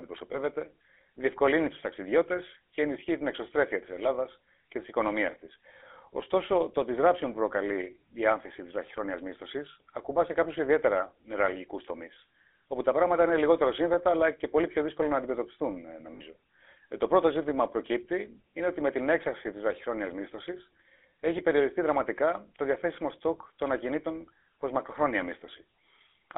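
A speech recording carried over GSM full-rate coding throughout. The line band runs only from 250 Hz to 3.6 kHz, and the coarse pulse excitation gives the voice a plainly audible buzzy, gravelly roughness, which fits the 13 kbit/s full-rate codec. On a spectrogram, energy stops sharply at both band edges and the harmonics look grainy and smeared. Lost GSM frames occur at 0.32 to 0.36 s, a 20 ms loss that fits a single frame, and at 16.14 to 16.21 s, just after "δύσκολο να αντιμετωπιστούν ε", a 60 ms loss that fits three frames. In each gap the last good frame is repeated, so the sound briefly hangs as a rough metallic ring. A spectrogram shows these as short, flat horizontal streaks, and the waveform shows a repeating envelope.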